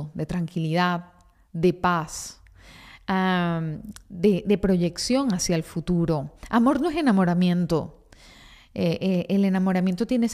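Speech, and there's nothing technically wrong to point to anywhere in it.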